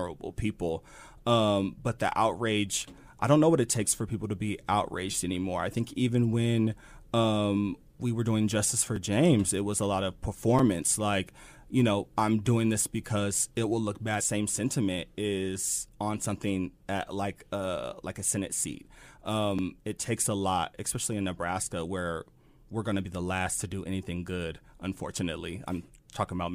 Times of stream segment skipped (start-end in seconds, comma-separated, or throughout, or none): 14.19